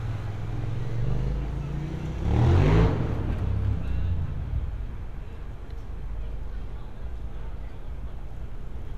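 No technical faults can be heard anywhere in this recording of everyday sounds, and the signal stays intact and continuous throughout.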